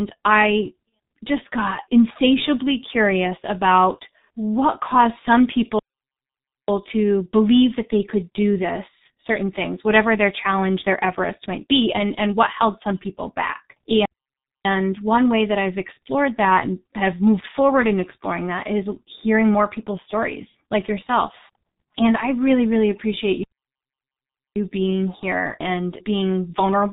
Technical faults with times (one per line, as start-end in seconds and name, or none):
0.00-26.93 G.723.1 codec
0.89-0.92 VoIP packet loss concealed by the speech codec
5.79-6.68 playback stall
14.05-14.65 playback stall
23.43-24.56 playback stall